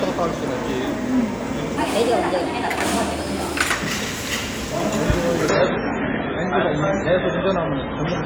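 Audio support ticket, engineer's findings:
Section at the wrong speed, 1.77–3.71 s: sound runs 1.31 times fast, pitch up about five semitones; likely a resampling or clock mismatch in the editor or player.

Adaptive stream at a lower bitrate, 5.49 s to end: sudden switch, no gap, nothing above 7.3 kHz, codec artefacts rise; fits a drop from 128 to 16 kbit/s MP3.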